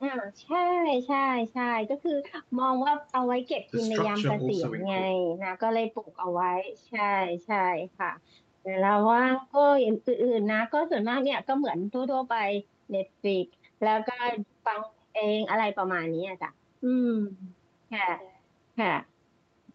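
Nothing's technically wrong with this speech recording; it just carries the ordinary marks of a call, with the microphone processing trimming the deepest bass and the call codec capping everything at about 8 kHz, which fits Opus at a modest bitrate.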